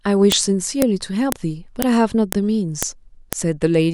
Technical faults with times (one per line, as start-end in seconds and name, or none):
0.32 file header played as audio
0.82 file header played as audio
1.32 file header played as audio
1.82 file header played as audio
2.32 file header played as audio
2.83 file header played as audio
3.33 file header played as audio